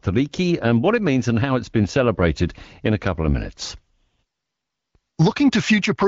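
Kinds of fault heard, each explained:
Nothing in this speech clip stood out as a fault on listening.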